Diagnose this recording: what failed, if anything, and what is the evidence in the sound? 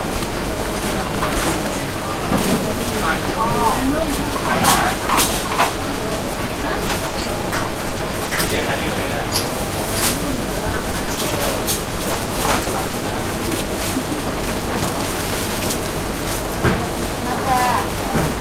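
Network stage: repeated packet loss (robotic sound) at 6.33–8.63, 10.33–11.33 and 11.83–13.03 s. Holes up to 60 ms are patched with repeated sound, so it turns choppy rather than falling silent.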